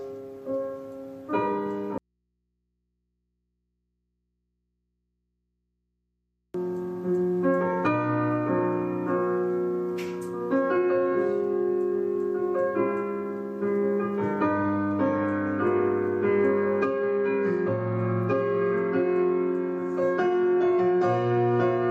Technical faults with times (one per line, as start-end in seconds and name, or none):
1.98-6.54 audio dropout to a faint residue